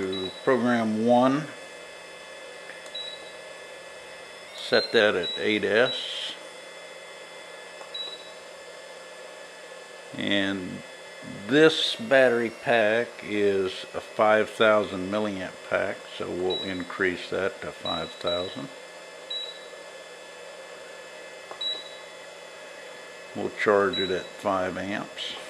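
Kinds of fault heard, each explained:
Drift correction step: The sound twice jumps about 6% faster and roughly a semitone sharp, from 4.48 to 5.00 s and from 11.84 to 12.81 s, then snaps back, likely a clock-matching buffer adjustment. Unlike wow or flutter, the shift is abrupt and steady rather than wavering.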